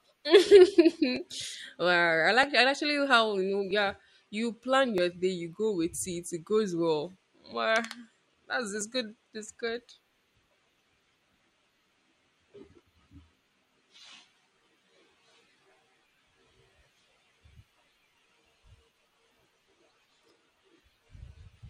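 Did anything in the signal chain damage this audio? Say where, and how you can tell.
Yes. Regular clicks recur every 1.27 s through the speech from 1.16 s to 21.57 s, about fifteen in all. They most likely come from clock drift buffer slips at the driver or buffer stage: two clocks disagreeing by around 500 ppm force a jump of a few tens of samples. On the waveform each is a small step discontinuity, and on the spectrogram a thin vertical broadband line.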